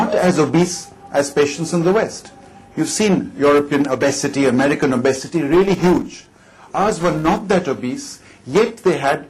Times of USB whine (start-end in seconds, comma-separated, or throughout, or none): none